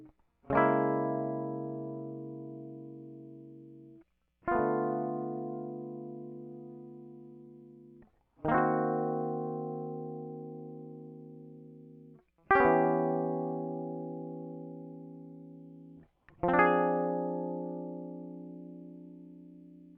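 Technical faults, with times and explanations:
No technical faults can be heard in this music. There is nothing to time or explain.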